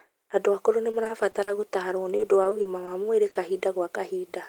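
A speech recording with two bouts of repeated packet loss (robotic sound) and a pair of short concealed packet losses. From 0.91 to 1.49 s and again from 2.17 to 2.89 s, just before "wa mwĩri", the voice turns choppy. Each stretch has about five dropouts, none longer than 40 ms, that are patched by extending the preceding sound, about 120 ms in all, roughly a fifth of the first stretch and a sixth of the second. What separates this from a single loss is the rapid recurrence: the patches come close together, so the synthetic continuation keeps breaking in.

Just after "wa mwĩri", short concealed packet loss strikes at 3.29 s and again at 3.33 s, back to back, each a 20 ms hole filled by continuing the last sound before fading into the real signal. Together they sound like one brief smear or wobble of about 40 ms rather than a robotic passage, because this is an isolated event.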